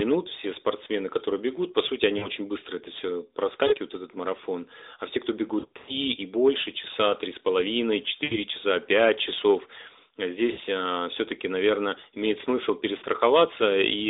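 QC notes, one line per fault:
2.18 to 13.04 s, lost AMR speech frames: six dropouts, at 2.18–2.29 (after "которые бегут по сути", before "быстро это все"), 3.68–3.75, 5.60–5.95 (between "все кто" and "и больше часа"), 8.24–8.36, 10.52–10.60, and 12.98–13.04 (after "наверное имеет смысл"). The short ones last 40 to 80 ms and come across as a quick warble or dip. At 5.60, about 200 ms are missing across 280 ms, with one 100 ms stretch. There the decoder keeps repeating its last good pitch and tract settings at falling gain, so the sound smears and fades before returning rough. All of this sits on a narrowband 300 Hz to 3.7 kHz line.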